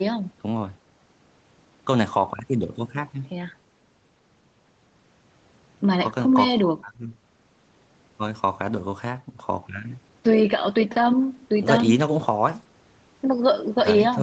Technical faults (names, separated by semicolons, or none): none